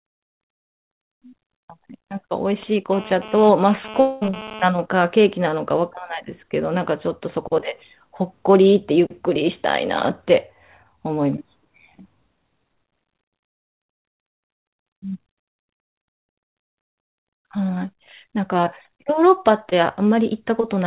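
Over this phone-band speech recording, which runs through a G.711 mu-law call path with nothing above 4 kHz and a narrowband, grainy sound, you get three problems. From 2.63 to 4.65 s there's a GSM phone buzz, a harsh, raspy tone at about 217 Hz with a dense stack of harmonics, sitting about 15 dB below the speech and unrelated to it. It keeps coming and going rather than holding steady, which fits a 2G handset nearby doing a data transfer, with its transmit bursts being rectified by the audio circuitry. Overlapping the tail of that, from 4.00 to 4.23 s, the sound smears into a continuation of whatever was last heard, a fading hold lasting about 210 ms that never quite drops to silence before the real audio picks up again further along, with that stretch simply gone. That's likely a long network dropout, where roughly 220 ms never arrived and the receiver papered over the gap. Finally, at 19.69 to 19.73 s there's a short concealed packet loss, a quick smear or wobble where about 20 ms went missing and the decoder filled in about 21 ms by extending the preceding sound before blending back into the real signal.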